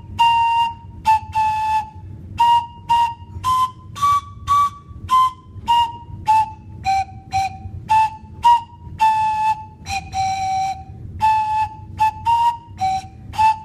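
Nothing technically wrong turns up anywhere in the clip, so there's nothing to flag here.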